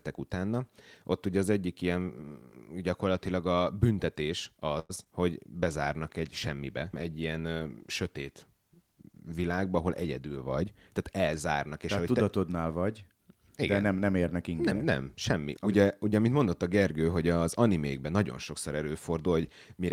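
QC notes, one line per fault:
4.79 to 4.91 s, short stall from a late packet: a packet arrived late and the jitter buffer ran dry, so the receiver held the last sound for 100 ms and then carried on without losing anything. Heard as a drawn-out syllable with a faint buzz; a spectrogram shows flat, frozen harmonics across that stretch, and total delay rises by 100 ms.
4.95 s and 5.04 s, short concealed packet loss: about 20 ms of audio went missing each time and the gap was filled by extending the previous sound, then crossfaded back. Each one sounds like a small smear or wobble; the waveform shows a short, smoothed patch.
5.47 to 11.11 s, call bitrate drop: the encoder was cut from 32 to 18 kbps and stayed at the low rate for about 4.6 s. Coarser coding makes the speech rough and watery, and the top end dulls. On a spectrogram the high band thins out or ends at a lower ceiling, then fills back in once the rate recovers.
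10.20 to 11.35 s, jitter buffer speed-up: with excess audio queued, the receiver removed short pitch-period slices again and again, roughly a tenth of a second in total, so speech runs about 7% fast at unchanged pitch and sounds hurried. The waveform shows slightly compressed syllables joined by small splices.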